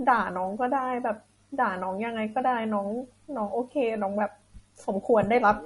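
A speech recording with plainly audible watery, swirling artefacts throughout and nothing above about 11.2 kHz, likely from MP3 compression at a low bitrate, roughly 44 kbps.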